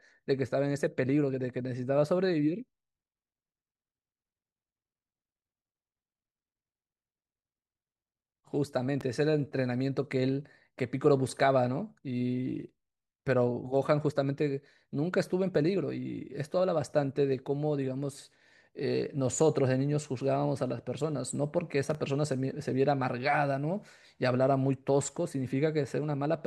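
Loud pops at 9.01 to 9.03 s and 21.90 to 21.97 s (a double pop), each peaking around 5 dB above the speech, likely from a sudden voltage step such as a plug, switch or static discharge, heard as sharp thumps over the continuing speech.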